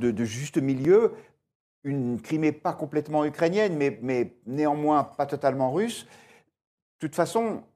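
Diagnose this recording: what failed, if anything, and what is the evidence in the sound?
At 0.85 s, right after "de juste", the speech skips forward with no silence. Likely a dropped buffer (overrun) at the driver stage: a millisecond or two went unread. Expect a waveform step and a thin broadband spectrogram line.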